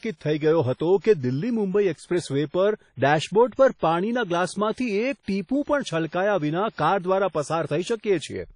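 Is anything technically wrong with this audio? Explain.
Yes. Throughout, the speech sounds washy and ringing, with hiss breathing alongside it. This is likely WMA compression at a low bitrate, around 32 kbps. A spectrogram shows nothing above 10.1 kHz and gappy, smeared upper bands.

Pre-echo occurs from 6.07 to 6.12 s. The codec spread its quantisation noise across the block, so about 57 ms of hiss precedes a sharp attack. This appears as noise in the waveform just ahead of the onset.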